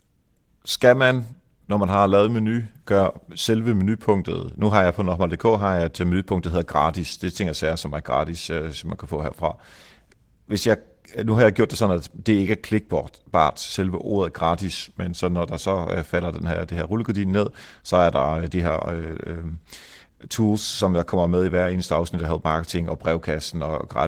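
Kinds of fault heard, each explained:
Nothing here stands out as a fault: the speech comes through Opus voice compression at 20 kbps with its full bandwidth intact, which is just the codec doing its normal job.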